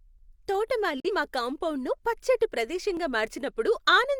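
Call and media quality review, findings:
Digital broadcast dropout, 1.00 to 1.10 s. Speech cuts to silence through a 3 ms fade, then returns just before "మా కాంపౌండును పచ్చటి". Receiver muted on a bad frame. About 43 ms of programme is gone, which fits one lost frame. The muted stretch runs longer than the loss.

Dropped buffer (overrun), 2.97 s, just after "మా కాంపౌండును పచ్చటి". Small forward jump, no silence. Roughly 5 ms missing. Likely capture overrun: the buffer was overwritten before it was read, and the two sides were spliced directly.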